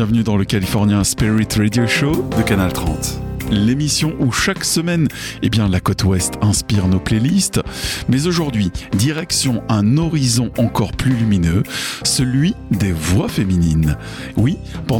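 From 0.18 to 14.59 s a click recurs every 0.6 s, likely clock drift buffer slips: a roughly 300 ppm clock mismatch drops or repeats a few samples.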